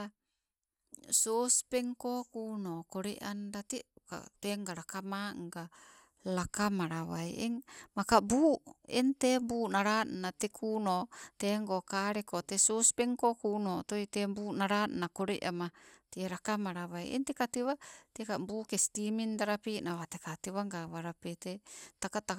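Speech that sounds swirly, hollow and smeared throughout, with blurred consonant attacks and nothing above 17.8 kHz. The likely cause is generation loss: around seven lossy encode-decode passes, consistent with MP2 at 128 kbit/s, each requantising on a shifted frame grid so noise piles up.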